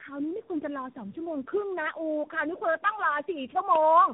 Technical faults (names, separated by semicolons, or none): tandem speech coding